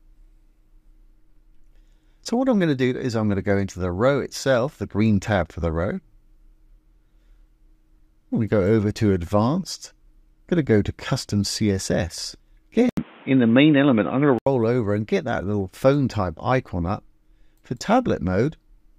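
From 12.89 to 14.47 s the audio turns dull and boxy after an 80 ms gap, with nothing above 3.8 kHz, a modest level shift and new background noise, likely an input switched to a poorer device.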